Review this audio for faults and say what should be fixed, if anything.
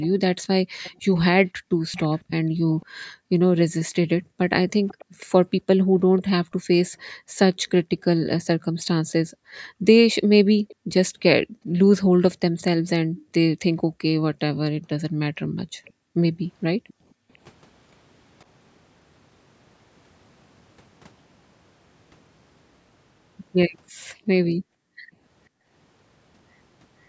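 A faint, delayed copy of the speech trails the main voice by about half a second, sitting about 20 to 30 dB below it. This happens from 0.01 to 2.86 s, 4.88 to 5.26 s, 6.18 to 6.23 s, 10.68 to 10.76 s, 15.85 to 15.92 s and 16.88 to 17.38 s. This echo leak is likely from a far end on loudspeaker whose echo canceller let part of its microphone pickup return. Headset use or better echo-canceller tuning at that end would prevent it.

The room sound also dips sharply, by as much as about 40 dB. This occurs in scattered moments totalling around five seconds between 0.64 and 17.31 s, then for about a second between 24.06 and 25.68 s. This is background gated by the echo canceller, which clamps the microphone while playback is detected and then releases it. Gentler suppression or comfort-noise fill would keep the background steady.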